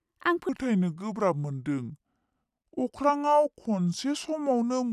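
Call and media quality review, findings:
Wrong sample rate from 0.49 s to end: playback clock mismatch, consistent with 44.1 kHz audio played at 32 kHz; speech slowed to 0.73x, pitch down about 5.5 semitones.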